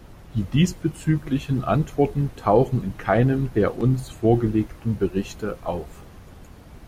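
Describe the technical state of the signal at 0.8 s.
At 0.8 s begins a run of clock drift buffer slips, lasting to 6.81 s: a brief click every 1.5 s, about five in all. Two unsynchronised clocks likely force a few dozen samples to be dropped or repeated. Each slip appears as a waveform step and a thin vertical broadband line on a spectrogram.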